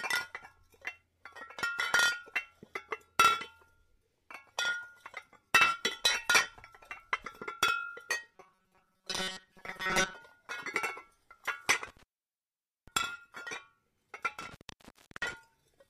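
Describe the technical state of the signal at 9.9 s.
At 9.9 s the playback is inside a stretch of robotic sound from repeated short buffers, running from 8.34 to 10.14 s. New audio is likely arriving too seldom, so the software keeps replaying a tiny slice of about 5.3 ms while most of the real material is skipped. That fixed loop imposes a steady 188 Hz buzz, turning the everyday sounds into a rigid, metallic drone that only loosely tracks their original shape.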